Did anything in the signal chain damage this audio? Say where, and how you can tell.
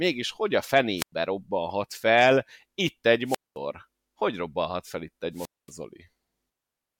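Yes, wireless microphone squelch dropouts in the radio link: at 0.97 s after "hogy a", 3.26 s and 5.33 s, rising hiss precedes holes of 0.1 to 0.23 s, unlike clean packet-loss gaps.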